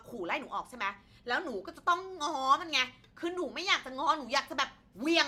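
No technical faults can be heard anywhere in the recording; the speech signal stays continuous and steady from its first moment to its last.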